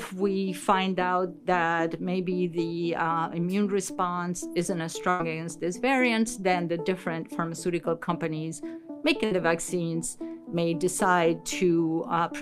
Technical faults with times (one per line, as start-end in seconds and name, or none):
5.09-5.21 burst of packet loss
8.03-8.09 short concealed packet loss
9.25-9.33 burst of packet loss